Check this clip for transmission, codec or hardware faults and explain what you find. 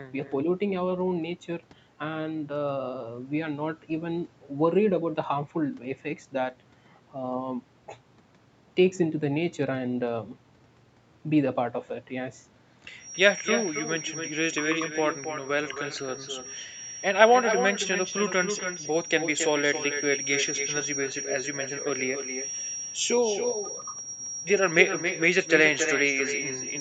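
One transmission fault runs through the whole clip: an echo with no canceller. Every phrase is trailed, roughly a third of a second later, by a thinner copy only about 7 dB quieter than the speech. The far end likely played the call through a loudspeaker, its microphone picked it up, and nothing removed it, so the speech returns after the network round trip. Nothing reaches above 8 kHz, which fits the call's wideband Opus coding.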